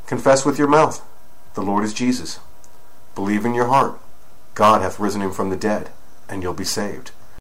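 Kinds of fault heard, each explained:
Crude rate conversion: from 3.10 s onward, samples are simply repeated instead of filtered, which fits a 44.1 kHz to 48 kHz change. This adds a gritty inharmonic fizz roughly 25 dB down, and a spectrogram shows stray tone lines shadowing loud, high components.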